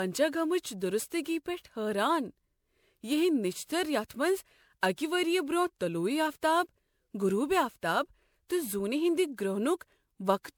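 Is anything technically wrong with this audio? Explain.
Yes. Generation loss runs through the whole speech clip. The sound has a swirling, hollow quality with smeared consonant attacks, more degraded than a single lossy pass would leave. This likely comes from repeated lossy re-encoding, around seven passes through a codec consistent with MP3 at 128 kbit/s. Each decode and re-encode quantises on a shifted frame grid, so noise and spectral gaps accumulate. The band still extends to about 20.9 kHz, so the damage shows as texture rather than dullness.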